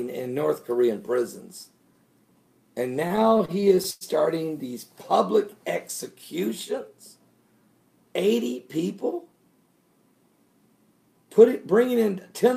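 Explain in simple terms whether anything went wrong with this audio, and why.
From 3.07 to 4.04 s, repeated stalls (stutter): late-arriving data paused playback eleven times, up to 104 ms, stretching the last sound over each gap.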